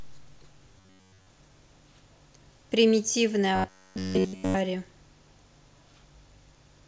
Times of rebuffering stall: none

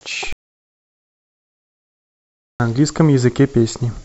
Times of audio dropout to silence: 0.33-2.60

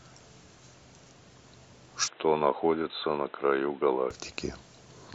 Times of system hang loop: none

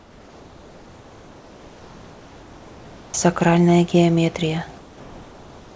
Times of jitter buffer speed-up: none

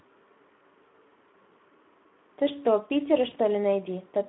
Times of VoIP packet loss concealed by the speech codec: 3.29-3.35

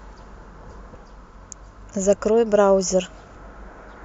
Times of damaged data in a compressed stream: 0.93, 3.35

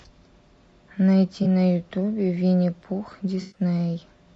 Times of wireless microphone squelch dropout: none

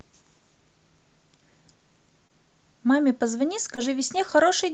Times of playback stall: none

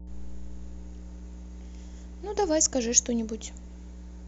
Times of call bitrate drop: none

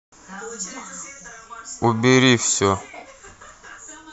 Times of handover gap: none

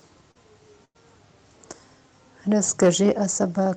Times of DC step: none

